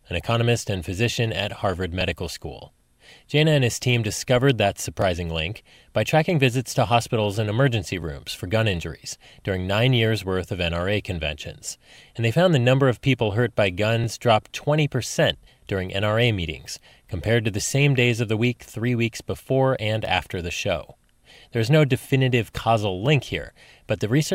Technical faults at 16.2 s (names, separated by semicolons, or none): none